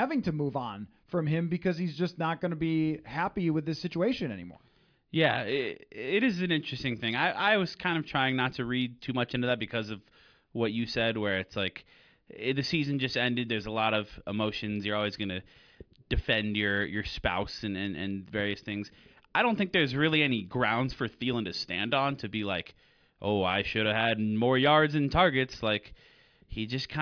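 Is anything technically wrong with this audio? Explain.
No, nothing technically wrong can be heard in this audio. The speech comes through with no audible fault at any point.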